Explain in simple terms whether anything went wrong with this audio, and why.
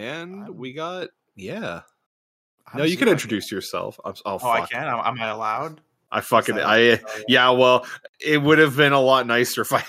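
Yes, one thing went wrong. At about 1.02 seconds, just after "I'm we", the whole sound suddenly gets louder in one step. This is a microphone volume stepped up fault. The call software decided the microphone was too quiet. So it turned up the microphone's input volume all at once. The voice and the background noise both jump up together. It happens mid-speech, so you hear a sudden change in loudness.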